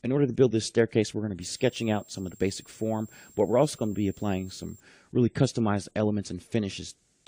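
From 1.41 s to 4.80 s, a switching supply whistle sits behind the audio. It is a thin, high tone around 7 kHz, wandering between about 7.39 and 7.57 kHz. It stays roughly 30 dB below the main signal. A switch-mode power supply is running its converter slowly enough to land in the audible band, and the pitch drifts as its load shifts.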